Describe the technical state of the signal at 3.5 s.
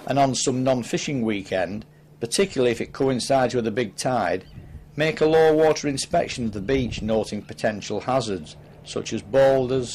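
At 3.5 s the signal is intact, with no dropout, distortion, or other fault audible at that point.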